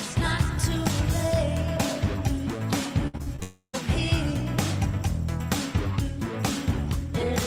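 Around 3.07 to 3.43 s the sound turns choppy. That's repeated packet loss: five short holes, the longest about 60 ms, each patched by stretching the previous sound, so roughly 38% of that stretch is filler. Right after, from 3.43 to 3.75 s, everything stops and the last bit smears into a fading buzz that sinks to near-silence before the audio picks back up, with that piece simply gone, most likely a long network dropout.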